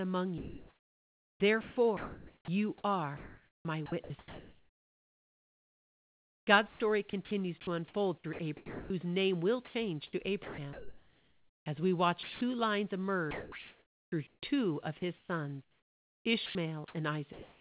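Sound chopped by the voice detector runs from 0.38 to 12.41 s and again from 13.31 to 17.61 s, likely because the sender's voice detector kept toggling transmission. About 6.6 s and 2.1 s of speech give way to comfort noise, leaving choppy syllables, all within a call band that stops at 4 kHz.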